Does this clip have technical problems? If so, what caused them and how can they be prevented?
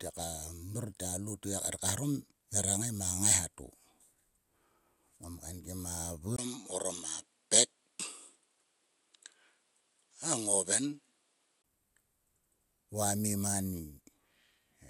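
Yes. From 6.36 s to 11.64 s, the likely cause is the input switched to a poorer device. A spectrogram shows everything above 11.4 kHz cut off flat, a 20 ms gap in the waveform at the switch, and a faint new noise floor, with the level about unchanged. Locking the recording input to one device prevents this.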